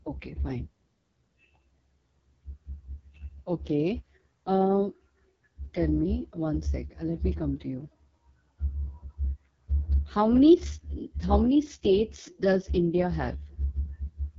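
From start to finish the speech passes through the AMR wideband (HD Voice) codec at what sounds like its lowest rate, around 6.6 kbit/s. The coding damage is heavy. Voices turn rough and raspy. Nothing reaches above about 7.3 kHz. The top band is synthetic noise, not real detail.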